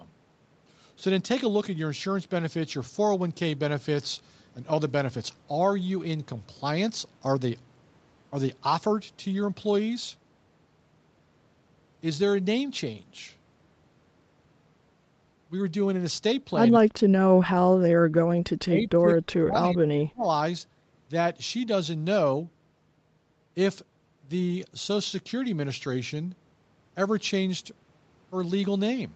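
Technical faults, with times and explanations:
5.81 s and 19.51 to 19.53 s: lost packet rebuilt from error correction. Each time about 20 ms of audio sounds briefly rougher and noisier, but there is no gap. That fits a single lost packet replaced by the low-bitrate Opus copy carried in the next packet.
18.41 to 20.26 s: speech suppressed in double talk. The speech dips and cuts out in pieces, for about a second and a half in total, falling by about 35 dB at its deepest. The likely cause is the echo canceller muting the talker while both sides spoke at once.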